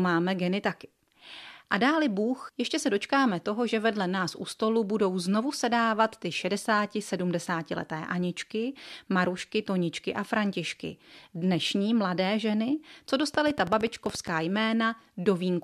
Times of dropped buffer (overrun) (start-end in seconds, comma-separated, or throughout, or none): none